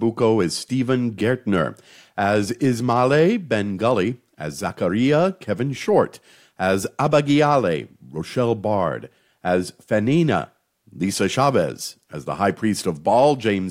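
No technical faults can be heard anywhere in this speech recording.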